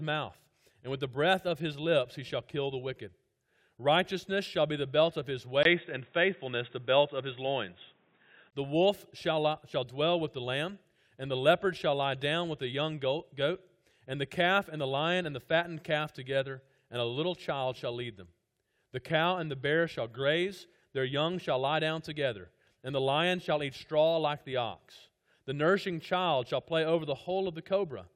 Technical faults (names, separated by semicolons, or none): input switched to a poorer device